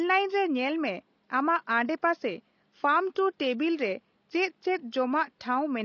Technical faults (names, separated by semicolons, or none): low-delay AAC compression